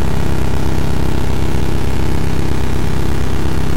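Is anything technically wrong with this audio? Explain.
Yes. At 2.81 s, compressed frames were skipped: a run of frames was never decoded, a gap fitting about seven 23.2 ms frames, so the sound jumps ahead about 150 ms.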